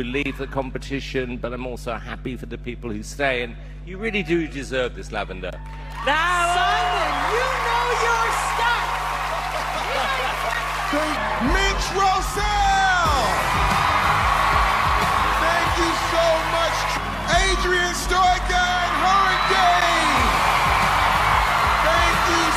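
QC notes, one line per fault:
Throughout: mains hum. A steady low tone sits under the sound at 50 Hz, fairly prominent against the signal. Power-line current is leaking into the audio path, from a ground loop or a nearby transformer. It stays constant and never changes pitch.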